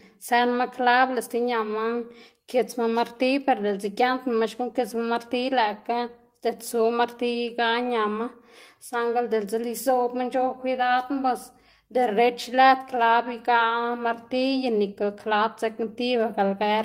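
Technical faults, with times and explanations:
7.45 to 7.49 s, short concealed packet loss: about 20 ms of the call's audio failed to reach the decoder in time, so the receiver invented a 20 ms stand-in by extending the sound it had just played, then crossfaded back into the real signal as it resumed. Because the patch is a continuation rather than what was actually said, this short stretch comes across as a brief smear or wobble in the speech.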